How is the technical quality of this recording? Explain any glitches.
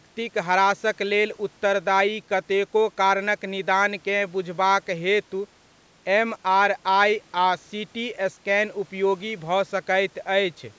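No glitches turn up anywhere in this speech recording; it simply carries the usual character of call microphone processing, with the lowest bass trimmed away and nothing above 8 kHz, which is just how that path normally sounds.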